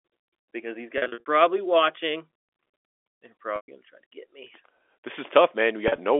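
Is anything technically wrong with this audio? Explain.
Yes, there is packet loss with pitch repetition, heard three times: from 0.98 to 1.26 s just after "because these", from 3.56 to 3.68 s just before "going to try to", and from 5.88 to 5.98 s. The first and last sound like a brief buzzy, held tone in place of the speech; in the middle one the held tone fades into silence before the speech returns with a short cross-fade. Packets went missing, and the receiver filled the gaps by looping the last pitch period. In the first and last events the losses are scattered rather than continuous. The narrow telephone band comes through the G.711 coding as expected.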